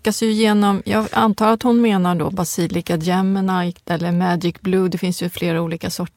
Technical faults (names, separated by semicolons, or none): none